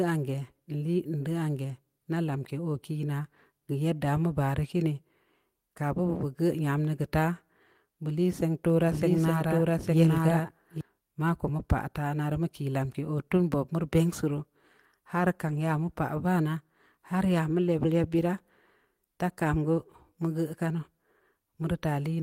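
Speech recording with two faults. From 8.87 to 10.81 s there is a doubled audio track: a full-band copy about as loud as the original trails it by about one second and starts and stops abruptly, likely from a second capture path or an edit holding two misaligned copies. From 15.47 to 15.57 s, a lost packet was rebuilt from error correction. The decoder substituted low-bitrate in-band copies, so there is no gap, but about 60 ms sounds rougher and noisier, which fits three lost 20 ms packets.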